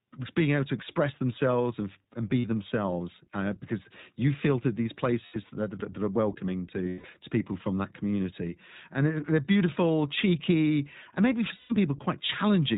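Throughout, the speech carries iLBC codec damage: a plainly rough, synthetic texture, with the spectrogram empty above 4 kHz, consistent with 15.2 kbps iLBC in 20 ms frames.

Lost iLBC frames occur at 2.40–2.45 s, 5.26–5.37 s, 6.84–7.07 s (scattered, longest run about 150 ms) and 11.56–11.74 s. Each gap becomes a held, slightly buzzy or breathy vowel. On the spectrogram it shows as frozen harmonic stripes, and on the waveform as one repeated pitch cycle.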